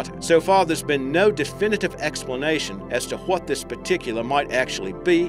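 No technical faults are audible.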